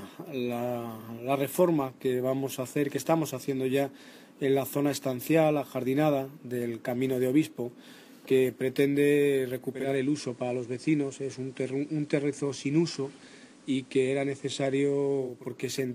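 The audio shows digital radio blending to analogue from 9.63 s to 15.53 s. The receiver lost its digital stream and cross-faded over 381 ms to the station's FM broadcast, then returned to digital at 15.53 s. The level drops by about 1 dB. A steady FM hiss sits roughly 35 dB below the signal.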